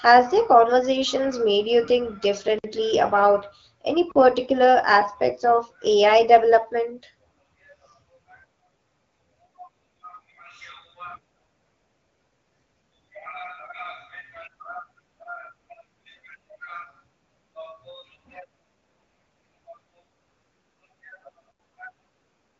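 Speech, carried through an AMR wideband (HD Voice) codec whose light coding shows only as a top end stopping near 7 kHz, is interrupted by three blocks of digital silence. The first lasts 55 ms, from 2.59 to 2.64 s, between "conversations made you think" and "about any particular aspects". The second lasts 40 ms, from 4.12 to 4.16 s, between "about any" and "particular aspects of". The third lasts 80 ms, from 21.52 to 21.60 s. Each drops to silence and returns with no fade. That sets it apart from codec frame-loss concealment, which fills a gap with smeared or repeated sound instead of dead silence. The likely cause is the output buffer not being filled in time.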